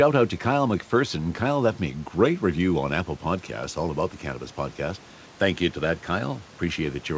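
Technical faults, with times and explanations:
No technical faults; the room noise sits about 28 dB below the speech, and the call-codec path shows its expected band limit with nothing above 8 kHz, which fits G.722 at 64 kbps.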